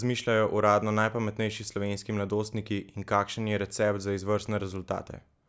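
Speech, with no audible faults.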